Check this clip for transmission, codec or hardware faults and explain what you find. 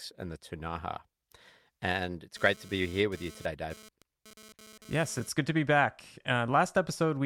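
One hardware-related interference fault is present: GSM phone buzz from 2.36 s to 5.29 s. A nearby 2G phone in data-transfer mode was sending radio bursts about 217 times per second, and the audio circuitry rectified those pulses into audible sound. The result is a hard, raspy 217 Hz buzz with many harmonics, which comes and goes and sits about 23 dB below the speech. Unlike mains hum, its pitch is not a multiple of 50 or 60 Hz, and it sounds harsh and gated rather than smooth and continuous.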